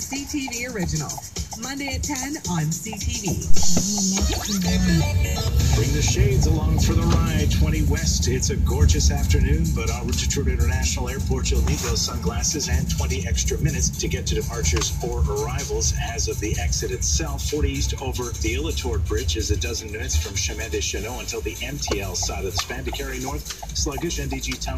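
At 3.5 s there's a phantom power thump: the supply got switched on or off on a live input, and that voltage step pushed straight through the coupling capacitors. You hear a deep thud peaking around -3 dBFS, dying off within about 82 ms, all settled by 3.86 s.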